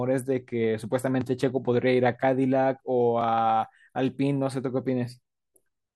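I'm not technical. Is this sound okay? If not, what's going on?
Yes, this sound is fine.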